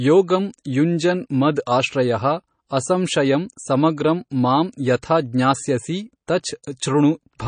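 Likely MP3 compression at a starved bitrate, which fits roughly 32 kbps, has damaged this speech recording throughout: the encoder removes everything above 9.5 kHz and drops faint spectral detail frame by frame, leaving dull, watery, swirling sibilants and smeared consonant attacks.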